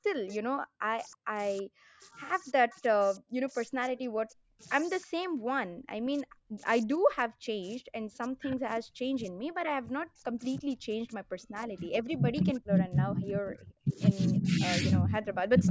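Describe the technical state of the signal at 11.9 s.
At 11.9 s three faults overlap. Converter idle tones run through the whole clip. Without dither, a delta-sigma converter handling low-level input settles into repeating bit patterns, and here they form a whistle near 7 kHz, about 22 dB below the signal. It is most audible in gaps and sits as a grainy layer under quieter passages. On a spectrogram it appears as a thin horizontal line near 7 kHz, below the 8 kHz ceiling of the call band.

The moment also falls inside the stretch from 7.95 s to the end where the speech is suppressed in double talk. The likely cause is that both ends spoke at once, so the echo canceller could not separate the near talker from the loudspeaker echo and attenuated both. The speech dips and fades in pieces, by about 25 dB at its deepest, totalling about 3 s across this stretch. A waveform shows abrupt notches in the envelope, and a spectrogram shows the upper harmonics thinning or vanishing in patches.

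From 11.42 s to 12.80 s there is an echo leak. The likely source is a loudspeaker at one end whose canceller let part of the microphone pickup through, returning a delayed copy of the voice 314 ms behind the original. It is weak, roughly 35 dB below the speech, and heard as a faint trailing ghost. On a spectrogram it shows as a dim replica of the speech pattern, shifted about a third of a second later.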